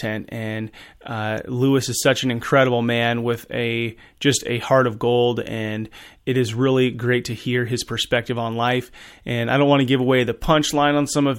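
No technical faults are audible.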